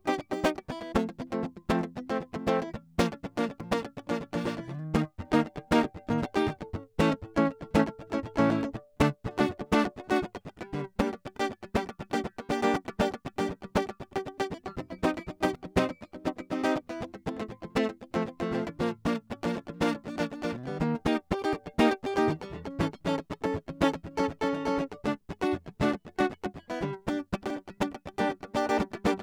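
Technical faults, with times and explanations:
3.60, 9.58, 15.55, 21.53, 27.50 s: audio missing between chunks. The music jumps forward briefly every 6 s, likely as a few tens of milliseconds are dropped and the gap spliced shut at each chunk boundary.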